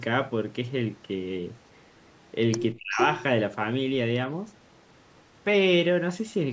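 Faint delayed scraps of the speech trail it by 367 ms from 1.66 to 1.87 s and 2.03 to 2.27 s, likely an echo leak from a far-end loudspeaker its canceller missed. From 2.75 to 3.0 s the speech plunges deeply, almost vanishing, likely speech suppressed in double talk as the canceller turned down both its own talker and the loudspeaker echo. From 2.9 to 3.23 s the 367 ms echo returns nearly as loud as the speech, and it recurs faintly from 4.77 to 5.23 s.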